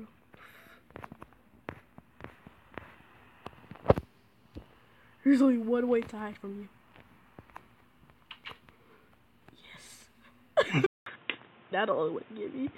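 At 10.86 s the input likely switched to a poorer device, leaving 200 ms of silence. From then to the end nothing passes above 3.8 kHz, so the sound turns dull and boxy at much the same level, over new background noise well below it.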